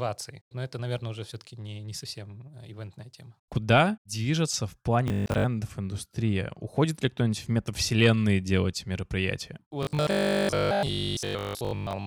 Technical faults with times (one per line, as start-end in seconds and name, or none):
5.08-5.44 robotic sound from repeated short buffers
9.83-12.06 robotic sound from repeated short buffers